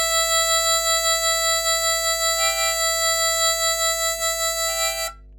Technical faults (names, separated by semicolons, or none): mains hum